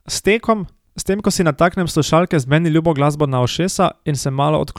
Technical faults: none

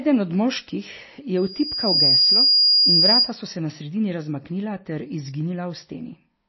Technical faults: MP3 compression; loudspeaker feedback squeal

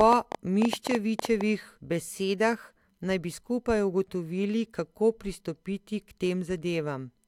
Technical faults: train of clicks

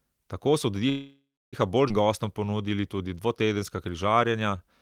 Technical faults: call audio freeze; skip ahead; jitter buffer slow-down

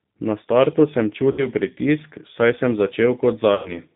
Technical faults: G.729 codec; VoIP packet loss concealed by the speech codec

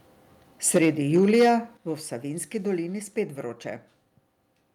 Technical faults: microphone overload; microphone volume stepped down

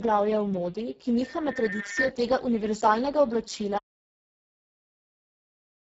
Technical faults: Speex codec; loudspeaker feedback squeal; audio dropout to silence

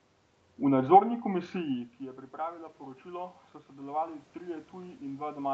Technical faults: automatic gain rising

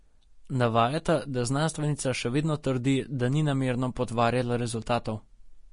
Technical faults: Vorbis compression

